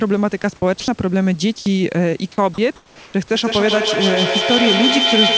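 A voice detector at the sending end, likely misjudging quiet parts of the speech as background, stopped transmission five times, and the receiver filled each gap with comfort noise. This is sound dropped by the voice detector, at 0.42 to 0.44 s, 0.80 to 0.88 s, 1.58 to 1.66 s, 2.32 to 2.38 s and 2.54 to 2.58 s. Each lasts 20 to 80 ms, and up to 70 ms of real speech is lost. The speech briefly thins into flat, steady hiss, then resumes as the detector reopens.

From 2.76 to 3.14 s the detector, likely treating the pause as silence, halted transmission apart from occasional updates. The receiver generated comfort noise in place of the background. The natural room background, which sits about 27 dB below the loudest speech, is replaced by a smooth, featureless synthetic noise that drops about 6 dB in level. The pause sounds like a sudden step into a quieter, lifeless hush.

At the end of that pause the detector reacted late to the returning speech, likely missing its first 30 ms. 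This is an onset clipped by the voice detector, at 3.11 to 3.14 s. The speech therefore starts abruptly, with its soft attack cut away and comfort noise played in place of those first moments.

Throughout, the G.722 call codec keeps everything below 8 kHz, and real room noise sits about 36 dB under the speech.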